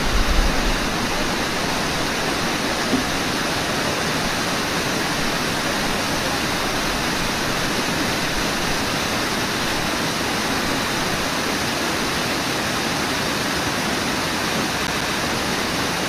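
From 14.87 to 15.15 s a fast, even stutter repeats a 138 ms slice twice with clipped mutes: CD stuck on one turn, the laser jumping back one track.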